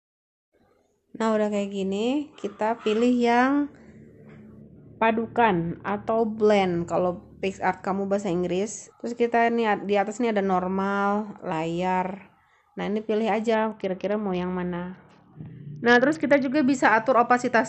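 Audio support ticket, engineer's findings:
Bluetooth SBC bit pool drop, twice: 4.61 to 6.18 s and 13.54 to 16.54 s. Treble goes dull, gritty noise rises, clean sound returns after each. Component: Bluetooth link, SBC encoder on the sending phone. Mechanism: congestion forces a lower bit pool. Top sub-bands starve, the rest quantise coarsely. Depth of loss points to a fall from about 28 to 7, near 66 kbps. Check link congestion.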